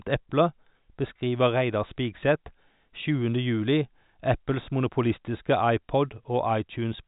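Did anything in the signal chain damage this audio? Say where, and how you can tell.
No, nothing damaged this audio.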